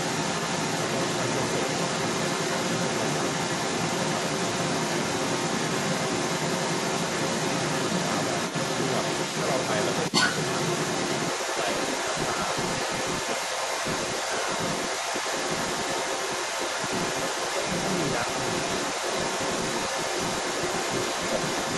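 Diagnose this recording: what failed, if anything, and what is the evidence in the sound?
Mains buzz entered in the analogue wiring. Switching spikes from a dimmer, a rectifier or an unshielded run are getting into the signal path twice per cycle of the 60 Hz supply. That puts a ladder of 60 Hz harmonics up into the kilohertz range. The result is a steady, raspy buzz under the speech for the whole recording, sitting at about 30 dB below the signal.

A second voice runs through the entire recording, from start to finish, and it sits about 5 dB louder than the main speech rather than beneath it. This is most likely the other side's voice leaking through at the call-processing stage. The far end's audio was played on the talker's loudspeaker, and the echo canceller left a large residue of it in the microphone feed, so the intruding voice competes with, and often dominates, the intended talker.

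The talker's speech is also pulled down twice: briefly from 12.86 to 12.90 s, and again from 14.21 to 14.31 s. Each time the level drops by about 5 dB, giving short dips rather than full dropouts. The likely cause is speech suppressed in double talk. With both sides active at once, the echo canceller could not separate near-end speech from loudspeaker echo and attenuated everything momentarily.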